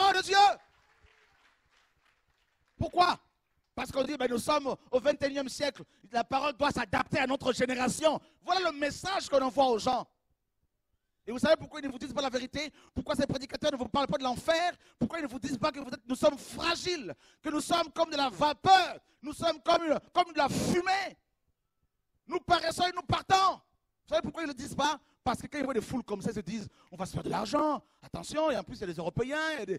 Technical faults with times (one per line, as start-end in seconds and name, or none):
none